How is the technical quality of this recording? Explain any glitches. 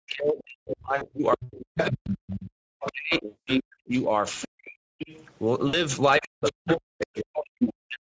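The speech is noticeably degraded: it has a codec texture throughout, and dropouts, buzzy gaps and a second voice recur across the clip.

Speex codec, throughout: the voice sounds hoarse and grainy, with hiss-like highs up to 8 kHz. The sound points to a mid-rate Speex setting near 17 kbps, with too few bits for a clean excitation signal.

Speech suppressed in double talk, 0 to 4.8 s and 6.19 to 8.04 s: the talker dips, dulls and drops out in pieces, by up to about 40 dB. The likely cause is an echo canceller muting both sides while both talk at once.

VoIP packet loss concealed by the speech codec, at 0.95 to 1.10 s, 3.25 to 3.49 s and 5.67 to 5.78 s: short buzzy, smeared stretches fade and then recover weakly. The decoder is extrapolating pitch across 60 ms, 220 ms and 60 ms of missing audio.

Other side's voice leaking through, 1.78 to 4.45 s, 4.98 to 5.25 s and 6.23 to 7.66 s: a second voice is heard at about 10, 15 and 5 dB below the talker. 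The likely cause is loudspeaker echo that was not cancelled.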